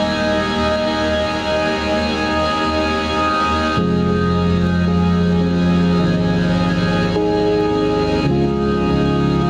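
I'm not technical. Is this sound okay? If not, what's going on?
No. Gain pumping runs through the whole piece of music, from start to finish. The level keeps breathing with the loud moments. The likely cause is a recording level set far too high, with a fast limiter or compressor clamping down on every peak. That squeezes loud and soft parts together, leaving the music flattened and squashed.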